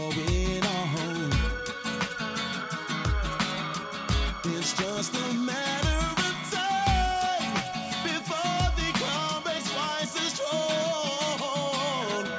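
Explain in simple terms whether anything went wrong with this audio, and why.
Nothing went wrong here.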